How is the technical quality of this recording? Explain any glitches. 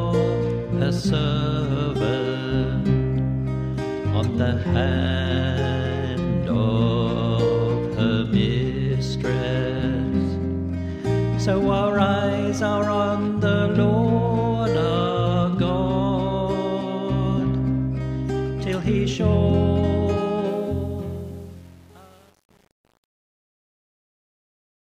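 The closing fade-out has one clear technical fault, truncation distortion on a fade. From about 20.47 s to the end, the level drops as expected, but the fading stage keeps too few bits and adds no dither, which fits an 8-bit word length. From 20.86 s onward the quiet tail turns gritty. On a waveform the decaying signal becomes coarse square steps. A spectrogram shows broadband hash instead of a clean taper.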